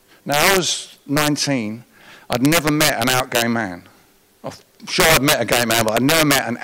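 Integer overflow cracks the speech at 0.32–0.57 s, 1.17–1.28 s, 2.33–3.42 s and 5.00–6.39 s. Peaks pushed about 3, 4, then 8 dB past full scale wrap to the opposite sign instead of limiting, giving violent cracks harsher than clipping.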